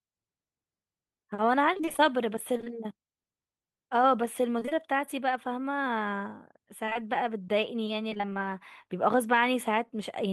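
From 1.73 to 2.70 s, packets repeatedly failed to arrive in time, producing repeated packet loss with robotic sound. The receiver patched each gap by extending the preceding audio, none longer than about 23 ms, covering roughly a fifth of the stretch. The speech turns choppy, with pieces missing. The same fault returns at 4.59 to 4.73 s, where concealment fills close to half the span and the choppiness is denser.

At 6.85, 6.89 and 6.93 s, three back-to-back short concealed packet losses each drop about 20 ms, which fits 20 ms packets. The decoder bridges each hole by continuing the last pitch or noise before rejoining the real signal, so the sound briefly smears and wobbles, and any quick consonant there can disappear.

From 8.09 to 8.37 s, repeated packet loss returns at its heaviest. About half the span is synthesised fill, giving a choppy texture with fragments missing.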